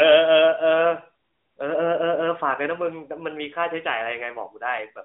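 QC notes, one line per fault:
No fault found.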